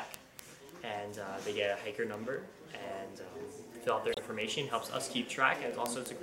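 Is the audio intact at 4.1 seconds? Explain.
No. From 4.12 to 4.19 s there is a brief stutter, as a 26.1 ms stretch plays twice. This is repeated frames: one compressed frame was sent or written again, so the decoder replayed it and the audio grew 26.1 ms longer.

Under this, and running from 0.14 to 6.21 s, sharp ticks of uneven strength recur about every 0.05 s. These are word clock ticks. The receiving device's clock is off from the sender's by roughly 500 ppm, so each time the clocks slip, a single sample is dropped or repeated.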